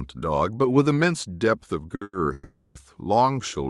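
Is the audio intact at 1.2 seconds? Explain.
Yes, the speech at 1.2 seconds is intact, with no dropout, glitch or other fault at that moment.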